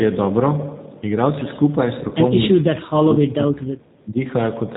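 Throughout, the speech carries the plainly audible signature of the G.729 codec, which fits its 8 kbit/s G.729A variant. The coder rebuilds each 10 ms frame from a vocal tract filter, a pitch predictor and a sparse set of pulses, so the voice comes out slightly rough and synthetic. Nothing above 4 kHz survives, which leaves the sibilants dull and the overall band narrow.

From 2.09 to 2.13 s there is VoIP packet loss concealed by the speech codec. The gap is 20 ms, consistent with a single lost packet. Having no data, the decoder repeated its last pitch and filter state at falling gain. This briefly smears the sound into a buzzy tone or coloured noise that fades. Because each frame is predicted from the previous one, the voice stays weak or distorted for tens of milliseconds or more after the gap.

From 2.61 to 4.18 s the level of the speech drops repeatedly, by as much as about 30 dB at its deepest. 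Parts go thin or cut out entirely, over about a second and a half in total. The pattern is likely speech suppressed in double talk: with both ends talking together, the echo canceller could not separate the near talker from loudspeaker echo and attenuated both.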